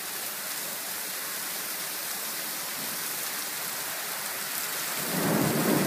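No technical faults can be heard anywhere in the audio, with the signal holding steady and intact throughout.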